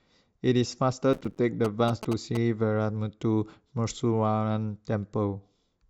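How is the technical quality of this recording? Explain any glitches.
Two glitches fall within the first two and a half seconds of the speech.

From 1.13 to 1.39 s, a gritty crackle tears through the sound. This is processor overload crackle: about twenty buffers of around 5 ms each missed their deadline and dropped out to silence.

From 1.65 to 2.37 s, a galloping dit-dit-dit of short buzzes at 217 Hz sits about 10 dB below the speech. These are GSM signalling bursts from a nearby 2G phone, rectified by the audio circuitry.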